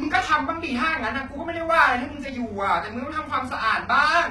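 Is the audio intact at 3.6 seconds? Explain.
No, HE-AAC compression runs through the whole clip, 3.6 s included. The treble is likely being rebuilt by spectral band replication, copied up from lower bands under a coarse envelope, at heavy damage that fits about 16 kbps, so s sounds come out gritty, metallic and lispy.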